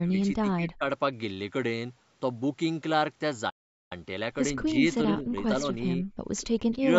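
From 0.00 to 0.84 s, the echo canceller likely met double talk and could not tell the near talker from loudspeaker echo, so it turned both down. This is speech suppressed in double talk: over roughly 0.7 s the voice sinks by as much as about 20 dB.

At 3.49 s the player likely ran dry or had its thread blocked, causing a playback stall. The speech stops dead for 0.41 s, leaving silence until about 3.92 s, when the sound picks up again.

The same double-talk suppression returns from 4.62 to 5.35 s, likely again from both sides speaking at once. The voice dips by up to about 20 dB across roughly 0.4 s. From 5.61 to 6.05 s it happens once more, likely for the same reason, and this time the dips are shallower, around 10 dB, affecting about 0.2 s. The voice sounds pulled back in both stretches.

From 6.38 to 6.76 s, an echo leak appears: one side's canceller likely let part of its loudspeaker pickup through, and that residue came back. 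A faint copy of the voice trails it by 126 ms, sitting about 25 dB below the speech.

At 6.78 s the double-talk suppression likely triggers one last time, briefly ducking the voice by about 15 dB for under 0.1 s.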